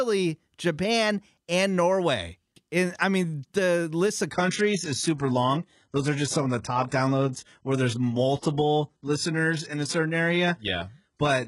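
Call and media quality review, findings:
Adaptive stream at a lower bitrate, 4.31 s to end, right after "mean the list of". Sudden step down: nothing above 11.1 kHz, synthetic top end, heavier artefacts. Player switched renditions, sounding like a low-rate HE-AAC variant. Seamless, no gap, unlike packet loss.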